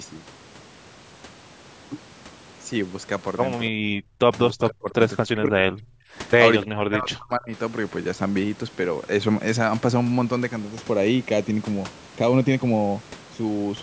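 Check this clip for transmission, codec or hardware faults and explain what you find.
Two faults show up: speech suppressed during double talk, then channel delay causing comb filtering near the end.

The speech suppressed in double talk hits at 3.71–3.77 s, 4.04–4.16 s, 4.51–4.99 s, 5.26–6.04 s and 6.62–7.51 s. The talker dips or drops out in chunks, sometimes by roughly 30 dB or more. This is likely an echo canceller that couldn't separate the near talker from far-end echo while both spoke, so it turned everything down.

From 10.6 s to the end, there's channel delay (comb filtering). One channel lags by a fraction of a millisecond, and summing to mono cancels regularly spaced frequencies starting around 1.5 kHz. The speech turns hollow and phasey, with fixed notches through the upper range.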